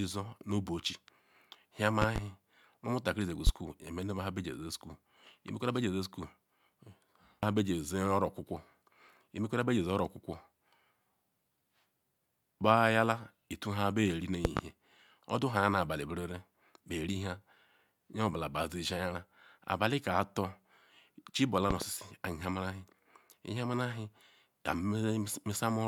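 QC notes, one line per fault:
2.02–2.20 s, loud pop: two sharp pops, peaking about 20 dB above the speech, which carries on underneath. A sudden voltage pulse, likely from a plug, switch or static discharge, hits the signal.
3.47–3.51 s, loud pop: a single shorter pop, about 15 dB above the speech.
14.45–14.61 s, loud pop: another double pop, about 20 dB up.
21.71–21.86 s, loud pop: a double pop again, about 20 dB above the speech.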